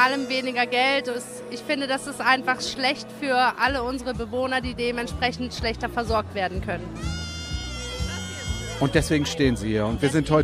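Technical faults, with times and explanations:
No technical faults found in the audio.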